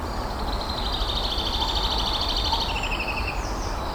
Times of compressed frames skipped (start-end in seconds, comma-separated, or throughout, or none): 0.45-0.50